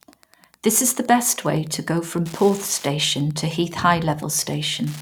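From start to finish the speech carries Wi-Fi interference: a nearby radio's beacon, rectified by the audio circuit, repeats every 102.4 ms as a steady ticking about ten times a second, roughly 25 dB below the speech. A spectrogram shows evenly spaced thin vertical broadband lines, and the waveform shows matching small spikes.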